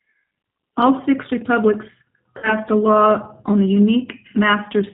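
From the start the speech carries the G.729 codec sound at 8 kbit/s. Each 10 ms frame is rebuilt from a vocal tract filter, a pitch predictor and a few fixed pulses, so nothing above 4 kHz survives. Consonants lose their air, and the voice has a plainly audible roughness and a slightly synthetic edge. That is the typical texture of a low-rate model-based VoIP codec.

At 2.38 s, right after "six republics", VoIP packet loss concealed by the speech codec takes over until 2.55 s. About 50 ms of audio is missing, which points to five lost 10 ms frames. The decoder extends its last pitch and filter settings and lowers the gain on each successive frame, so the speech smears into a fading buzzy tone or coloured noise. Because each frame depends on the state of the one before, the sound stays weak or distorted for a short stretch after real packets return, just before "a law on the".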